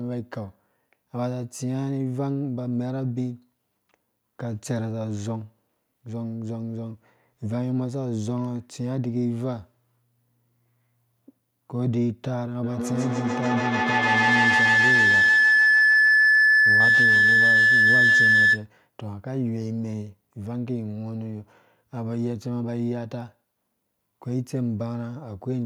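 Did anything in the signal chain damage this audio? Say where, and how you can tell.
Yes. From 12.63 to 18.7 s there's a feedback howl. Two devices in the same room are on the call, so the audio runs from one loudspeaker into the other's microphone and back again. Each pass comes back louder, and the sound narrows to a tone around 1.5 kHz. The loop repeats roughly every 150 ms, and the howl peaks about 9 dB above the speech. It continues until the loop is broken.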